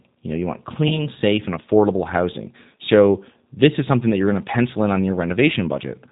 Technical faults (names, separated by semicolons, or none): G.729 codec; VoIP packet loss concealed by the speech codec